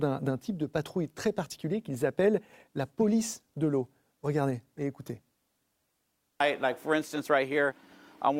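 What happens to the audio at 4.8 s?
At 4.78 s there's a corrupt frame decoded: a few damaged compressed frames got played anyway, putting stray energy in the wrong bands, heard as a faint, very quiet chirp, squeak, blip or burst of noise.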